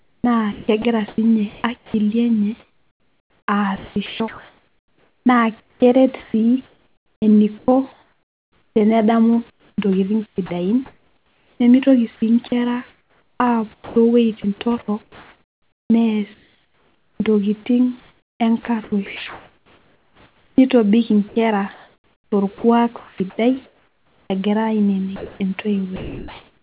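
Sound chopped by the voice detector runs from 0.0 to 11.6 s and again from 12.48 to 24.3 s. The speech keeps breaking up: quiet syllables and word edges drop out and are replaced by a flat hiss, so the background flickers between the real room and a synthetic fill. About 6.1 s of the first stretch and 6.2 s of the second are fill, likely from a sender's voice detector repeatedly deciding the quieter parts were silence and switching transmission off and on.

Comfort noise in place of the background covers 25.16 s to the end, at about 26.6 s. The faint room noise, sitting about 41 dB below the speech, gives way to a steady, featureless noise lasting roughly 0.9 s in total. This is likely discontinuous transmission: the sender stopped sending during the pause, and the receiver generated noise shaped to resemble the background instead of playing the real room.

Sound dropped by the voice detector starts at 25.96 s and continues to the end. 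The final bit of sound is swallowed, with about 0.3 s of it lost beneath the synthetic fill and about 0.67 s replaced in all. The likely cause is that the detector treated this trailing, quieter sound as background and cut transmission before it finished, so it never returns. Throughout, nothing is heard above 4 kHz, which fits a G.711 call path.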